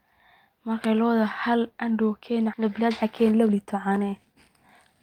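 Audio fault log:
2.53–2.55 s, skip ahead: The speech lurches forward with no gap, and the two sides of the jump butt together almost seamlessly. About a second of audio was discarded while later audio was already queued, cutting the delay sharply.
2.59–4.96 s, jitter buffer speed-up: The speech runs noticeably hurried, about 119% of normal speed, yet the pitch stays unchanged. The receiver was still holding more audio than it wanted and trimmed many tiny pitch-period slices in succession, shedding roughly half a second.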